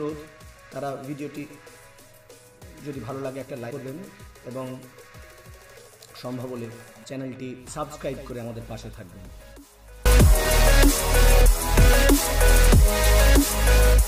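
No technical faults can be heard at any point in the audio.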